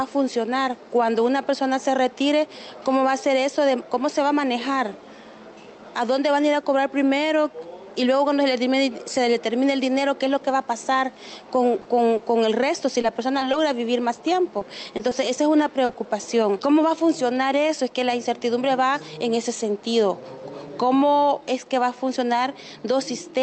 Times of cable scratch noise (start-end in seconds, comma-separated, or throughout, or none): none